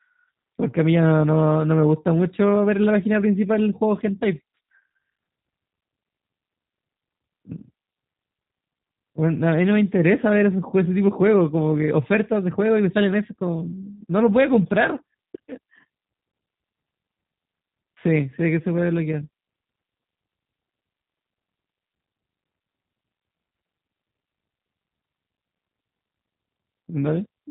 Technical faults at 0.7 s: G.729 codec

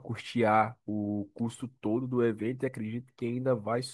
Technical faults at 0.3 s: none

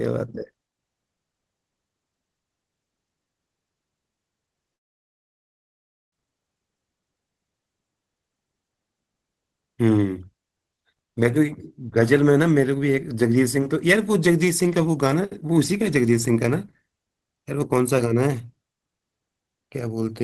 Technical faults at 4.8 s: long network dropout

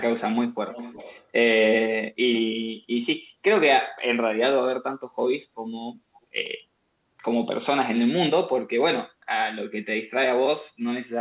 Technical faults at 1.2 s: echo leak

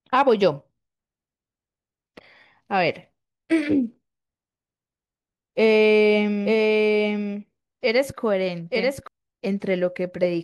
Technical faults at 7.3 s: doubled audio track

